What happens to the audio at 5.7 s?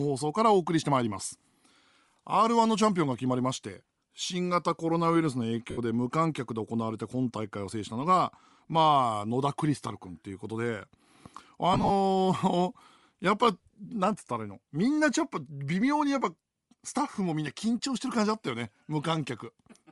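From 5.70 to 5.78 s, lost LE Audio frames leave a gap of about 68 ms, which fits nine 7.5 ms frames. The decoder repeats the last spectrum with random signs and fades it, so the speech smears into a noisy, hissy wash. That separates it from a plain dropout. Around the gap, the sound carries the breathy, grainy upper edge of low-bitrate compression, likely Bluetooth LC3 compression at a rate near 48 kbps.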